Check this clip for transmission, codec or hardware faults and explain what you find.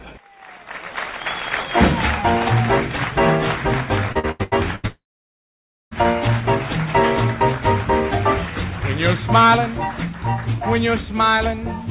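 Two transmission faults occur, back to back, in the middle of the clip. The audio also carries nothing above 4 kHz, which fits a G.711 mu-law call path at 64 kbps.

From 4.12 to 4.86 s there is repeated packet loss, heard as robotic sound. Five gaps fall in this span, the longest 82 ms. Each hole is patched by extending the last sound. About 42% of the stretch is patched this way, so the audio turns choppy and robotic.

From 4.87 to 5.94 s a long network dropout is the likely cause of the break. About 1.04 s of audio is lost. The last sound is stretched into a fading fill, and then roughly 0.9 s of silence follows. The audio then returns without the missing part.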